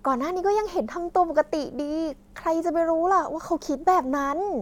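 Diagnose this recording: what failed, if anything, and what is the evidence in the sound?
Nothing in the speech recording points to a failure at any stage of the capture, transmission or playback chain.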